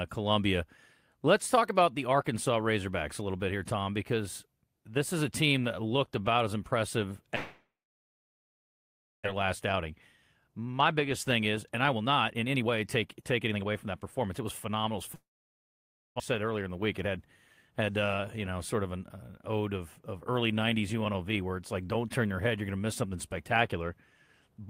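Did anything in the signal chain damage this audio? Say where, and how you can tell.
Yes, two kinds of network-side damage. Long network dropout: after "looked about as impressive", from 7.35 to 9.28 s, the last sound trails off as a fading buzz into silence, and again from 15.15 to 16.22 s. Unlike an edit or mute, that decaying fill gives away a receiver concealing lost packets, likely a network outage, and the audio returns with the gap's content gone.

Jitter buffer speed-up: from 10.47 to 14.98 s the sound runs about 117% fast, roughly 0.7 s shaved off, and briefly at 105% from 16.33 to 17.17 s. Pitch stays put, which rules out a sample-rate mismatch: the buffer is dropping pitch-period slices to drain excess delay after the outages.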